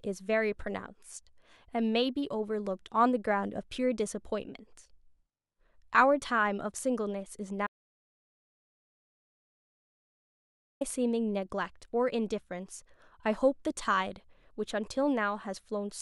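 An audio dropout to silence runs from 7.67 s to 10.81 s, cutting the speech off mid-flow for about 3.14 s. The signal falls to silence, with no room tone or background hiss underneath, before the speech resumes just as abruptly. That dead gap suggests the input was likely lost, through a disconnected device, a failed link or an accidental mute, while the recorder kept writing silence, so whatever was spoken in that stretch is gone.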